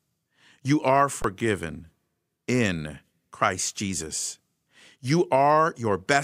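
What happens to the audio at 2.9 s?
Nothing goes wrong at 2.9 s; the audio passes through that moment intact, with no dropout, click or other fault.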